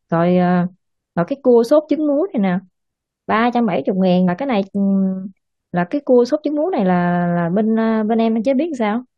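Around 4.28 to 4.30 s there's a short glitch from damaged data in the compressed stream; the decoder misreads a corrupted frame and loses sync before recovering.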